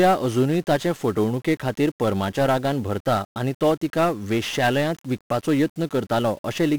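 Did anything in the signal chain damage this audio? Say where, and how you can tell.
Yes: 1-bit DFPWM compression damages the speech from start to finish, a fault at the codec stage. Each sample keeps a single bit that nudges an adaptive level up or down. The heavy broadband quantisation noise makes everything fuzzy and crackly, burying the treble in hiss, which fits a 48 kbps stream.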